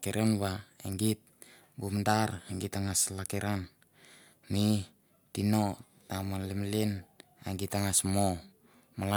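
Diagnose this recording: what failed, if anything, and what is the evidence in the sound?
Nothing failed in the signal chain: the speech signal stays continuous and intact at every stage from capture to playback, with no audible break, distortion or corruption at any point.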